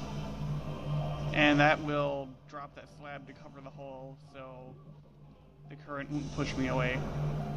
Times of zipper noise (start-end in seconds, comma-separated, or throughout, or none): 1.58-2.41, 5.76-6.50